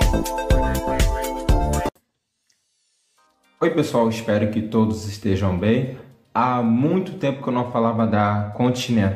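No technical faults are audible.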